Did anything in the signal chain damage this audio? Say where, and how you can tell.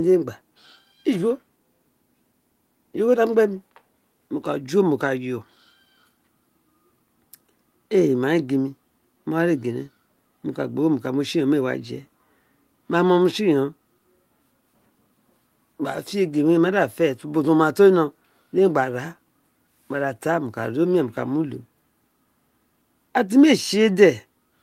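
No, no signal chain damage.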